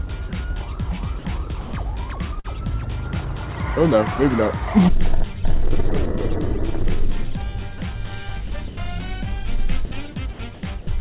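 At 0.29 s, 1.19 s, 1.61 s and 9.85 s the sound briefly gives way to steady synthetic noise, lasting 30, 60, 120 and 60 ms. This is likely sound dropped by the voice detector. The sender judged quiet passages to be background and stopped transmitting, so comfort noise filled the gaps.

From 2.39 to 2.47 s comes a burst of packet loss. About 51 ms of concealment extends the last sound and fades it. Then the audio resumes 60 ms further on. The stretch in between is gone.

Between 8.47 and 8.77 s, and again from 10.33 to 10.87 s, the sound turns choppy, with 120 ms and 210 ms replaced. The likely cause is sound chopped by the voice detector, toggling transmission repeatedly. Across the clip the call path's G.711 mu-law coding leaves nothing above 4 kHz, which fits a 64 kbps stream.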